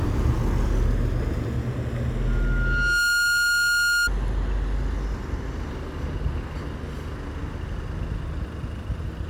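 From 2.26 to 4.10 s a piercing 1.4 kHz tone swells out of the sound within under a second and sits about 5 dB above it: loudspeaker feedback squeal. A microphone was picking up its own loudspeaker, and at that frequency the loop gain exceeded one, so the tone kept reinforcing itself.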